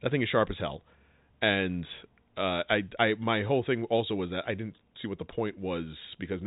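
The speech has no audible technical fault, only the narrow band of G.711 telephone coding, with nothing passing above 3.8 kHz, which fits a 64 kbps mu-law line.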